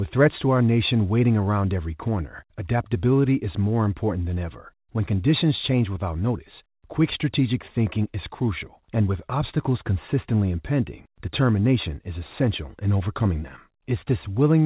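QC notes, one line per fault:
No faults are audible: the speech comes through a WebRTC call path, with the band stopping at 4 kHz as expected for narrowband telephony, which fits G.711 A-law at 64 kbps.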